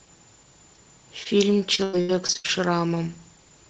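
At 1.23 to 1.27 s, a short concealed packet loss: about 20 ms of the call arrived too late for the decoder, so the receiver extended the preceding speech to cover the hole and blended back in. It is heard as a brief smear.

From 1.75 to 2.51 s, repeated packet loss produces robotic sound: the stream dropped out seven times, the longest gap about 93 ms, and roughly 44% of the span is concealment. The patched speech turns choppy, with pieces missing.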